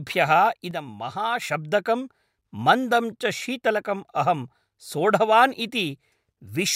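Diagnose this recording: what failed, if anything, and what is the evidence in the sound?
A sudden gain jump hits at 0.71 s: speech and background noise drop together by about 6 dB in a single step, then snap back at 1.42 s. There's no attack or release ramp as an AGC or compressor would produce, which points to a digital gain stage, likely an unramped setting change or bit shift in the processing chain.

Periodic clock jitter begins at 4.18 s, right after "मन्दं च शीतलकम्", and runs to the end. The speech takes on a rough, metallic edge from sidebands spaced around 100 Hz, which points to converter clock interference. Unlike mains hum, the roughness disappears in pauses and grows on brighter, higher components.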